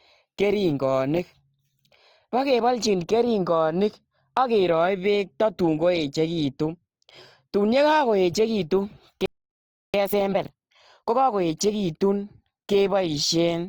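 Throughout the speech, likely Opus compression in its music mode at a low rate, consistent with about 24 kbps, leaves tones noisy, rough and grainy, though content still reaches about 20.4 kHz. From 9.26 to 9.94 s, a playback stall, likely from the player running short of data, cuts the speech off mid-flow into 0.68 s of silence. From 9.94 to 11.30 s, time-compressed catch-up trims and cross-fades small pieces to clear the backlog, so the speech runs hurried at 1.5 times speed without a pitch change.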